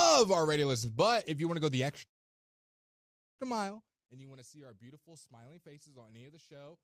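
At 2.05 s the speech stops dead. It is a call audio freeze. A brief trace of the last sound dies almost at once into silence until 3.42 s. The cause was likely late packets draining the jitter buffer. Speech then resumes where it halted, nothing lost, but 1.33 s later.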